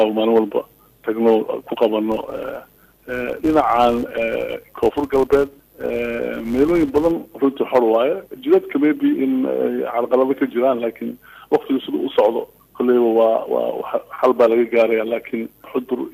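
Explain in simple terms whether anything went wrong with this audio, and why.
From 2.12 s to 7.12 s the sound carries a fine buzz at about 188 Hz, a filter restarted on every block. The filter processes audio in short chunks, which fits a 256-sample block, but wipes its memory between them, so each chunk starts with a tiny tick. Those ticks repeat so quickly they merge into a buzz. Unlike mains hum, this buzz rises and falls with the loudness of the sound and disappears when the sound goes quiet.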